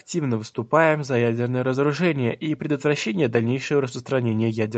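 No technical faults can be heard in this speech recording. It has passed through a call's microphone processing and codec, and nothing is heard above 8 kHz, which fits the bandwidth of a wideband Opus call.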